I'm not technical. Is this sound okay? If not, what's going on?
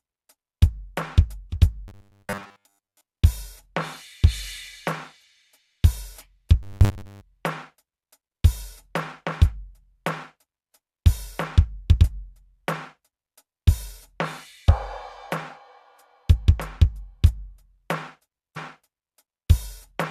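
No. There is robotic sound from repeated short buffers, from 1.88 to 3.06 s and again from 6.63 to 7.21 s. In both spots the music turns into a stiff, metallic buzz around 100 Hz. The likely cause is fresh audio arriving too slowly, so the player keeps replaying a tiny 10 ms scrap and skips most of the real music. That constant looping adds the fixed buzzing pitch.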